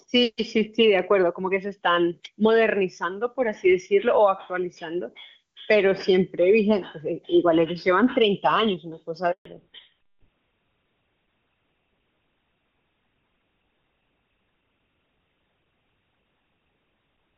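At 9.31 s there's a handover gap: the call hops between networks and no speech frames get through, so the sound drops out quickly and stays silent for about 140 ms, until 9.45 s. Whatever was said in that stretch is simply gone.

Right after, from 9.45 s to the end, you get a fallback to narrowband. Up to the gap, the HD Voice codec sounds clean and wide, fitting a high AMR-WB rate. Afterwards nothing survives above 4 kHz, consistent with an older codec like GSM full rate, so the speech turns duller and rougher.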